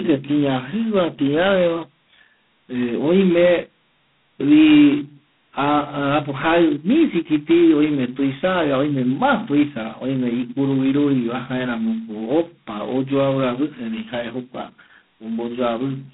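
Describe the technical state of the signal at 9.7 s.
At 9.7 s the speech carries G.726 ADPCM damage, as it does throughout. Coarse 16 kbit/s difference coding leaves a harsh, level-following rasp. Nothing passes above 3.9 kHz.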